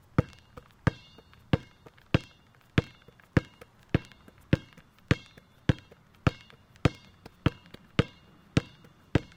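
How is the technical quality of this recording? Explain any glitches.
No glitches or technical problems are audible anywhere here.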